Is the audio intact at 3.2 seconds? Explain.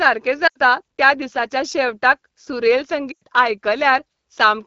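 No. From 3.11 to 3.23 s, just after "त्या दिसाच्या शेवटाक सुरेल", the speech shows lost AMR speech frames. Radio errors corrupted a run of frames, and the decoder filled the gap by repeating the last good pitch and vocal tract settings at falling gain. The sound drops to near silence within two frames, in a gap of about 100 ms that fits five 20 ms frames. Speech then returns briefly weak or rough.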